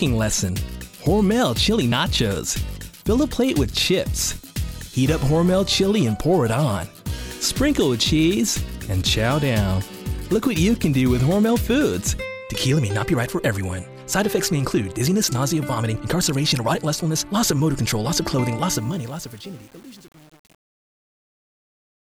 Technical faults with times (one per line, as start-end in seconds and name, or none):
18.72-22.16 truncation distortion on a fade